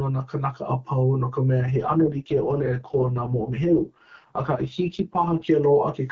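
From 1.60 s to 5.48 s the speech turns rough, raspy and synthetic, then clears again. The bandwidth is unchanged and nothing drops out, which points to an AMR rate drop: the link fell back from 23.85 to 6.6 kbit/s, the lowest wideband mode, where the excitation model is too coarsely coded to sound natural. Before and after, the AMR wideband (HD Voice) codec sounds clean at its top rate.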